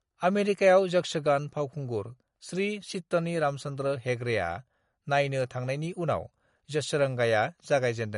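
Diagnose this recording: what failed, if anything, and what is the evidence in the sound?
The codec stage is where this went wrong: there's nothing above 11.2 kHz through the whole speech clip, and the damage is plainly audible, with quieter detail turning watery as weak frequency lines drop in and out. That's likely MP3 compression, which fits a starved bitrate around 48 kbps.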